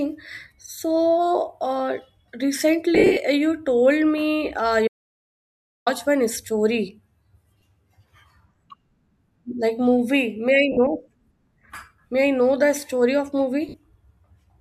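Lost LE Audio frames first hit at 2.95 to 3.17 s, with about 170 ms missing over 220 ms; the longest gap is roughly 70 ms. The LC3 decoder fills gaps by reusing the last spectrum with random signs, so tones smear into noise. An audio dropout to silence follows at 4.88 to 5.87 s. Nearly 1 s falls silent, with no room tone. A lost input link is the likely cause. Shorter lost LE Audio frames follow at 7.61 s, 10.72 to 10.77 s and 13.69 to 13.74 s. Each is a brief noisy blur.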